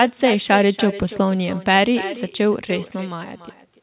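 Throughout the speech, an echo with no canceller returns each phrase about 13 dB quieter roughly a third of a second later, a distinct repeat rather than reverberation's smeared tail.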